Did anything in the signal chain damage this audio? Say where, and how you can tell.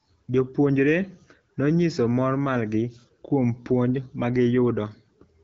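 No, nothing in the chain damages the audio: the speech passes through an AMR wideband (HD Voice) codec at a rate that sounds consistent with 12.65 kbit/s, where it stays clear, and its content stops near 7.6 kHz as that wideband path would be expected to limit it.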